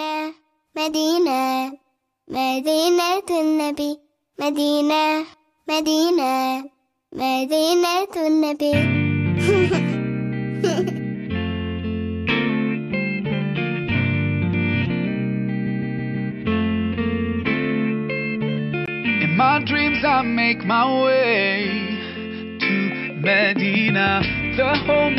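At 18.86 s the sound turns duller and boxier after a brief gap of about 20 ms, and stays that way to the end. From then on nothing reaches above 5.4 kHz, the level falls by roughly 5 dB, and a new, faint background noise appears well below the signal. The likely cause is an input switched to a poorer device. A simple filter or codec bandwidth change would narrow the band without the gap, the level drop and the new noise floor.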